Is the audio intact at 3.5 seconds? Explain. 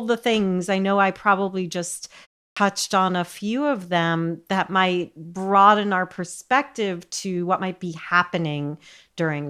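Yes, the speech at 3.5 s plays through cleanly with no dropout, distortion or glitch at that moment.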